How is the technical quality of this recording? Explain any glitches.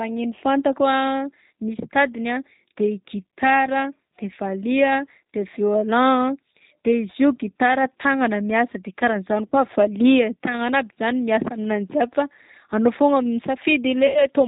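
The speech has clearly degraded quality, with constant codec coloration and two concealed dropouts.

G.729 codec, throughout: rough, slightly synthetic speech that fits an 8 kbit/s frame-based coder. The spectrogram shows nothing above 4 kHz and smeared harmonics.

VoIP packet loss concealed by the speech codec, 9.49–9.55 s and 14.07–14.29 s: the decoder repeats its last pitch and filter while fading the gain, stretching the sound into a buzzy tone or coloured noise that fades. The losses are about 30 ms (one packet) and about 90 ms (likely three packets).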